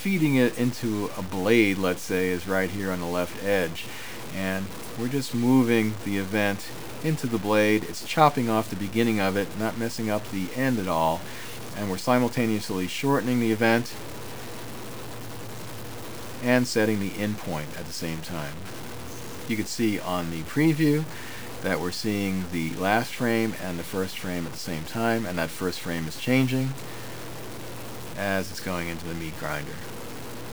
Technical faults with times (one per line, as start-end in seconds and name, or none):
0.00-30.52 low bit depth without dither